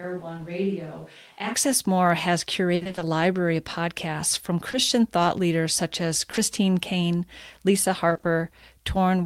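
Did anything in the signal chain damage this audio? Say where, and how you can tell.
Yes. From the start until 1.53 s the sound is roomy and hollow, thin in the bass, about 10 dB quieter, and has room noise only about 30 dB below the speech. That is a switch to a distant microphone, likely because the close microphone's feed dropped out at capture.

The network stage shows repeated packet loss (robotic sound) from 2.75 to 3.03 s, just before "library of podcasts from", and again from 8.09 to 8.25 s. Gaps of up to 60 ms, then 20 ms, were patched by extending the previous sound, covering about half the span and leaving choppy speech.

Short concealed packet loss also comes from the network. At 4.71 to 4.75 s, between "library of podcasts from" and "thought leaders such as", and at 6.31 to 6.39 s, right after "thought leaders such as", brief holes were filled from the preceding sound, leaving small smears or wobbles.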